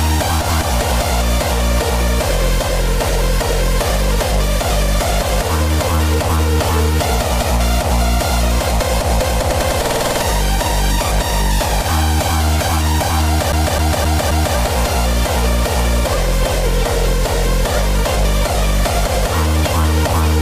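From 13.52 to 14.57 s the audio sticks like a CD stuck on one turn. A scratch throws the laser back to the same spot each revolution. A 262 ms slice plays four times. Each jump leaves a brief mute, giving a fast, even stutter.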